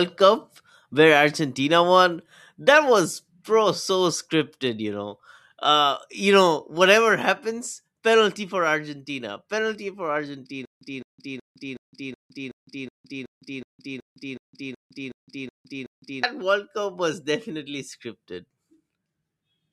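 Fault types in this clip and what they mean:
Stutter with silent gaps: right after "penalty for", at 10.65 s, the speech gets stuck. A clip of about 212 ms keeps coming back, followed by roughly 160 ms of dead digital silence, so it pulses every 372 ms, 15 times in all, until 16.23 s. That pattern likely comes from the player or stream stalling, replaying its last buffered fragment on each retry and then running dry, so whatever should have played in that stretch is simply gone.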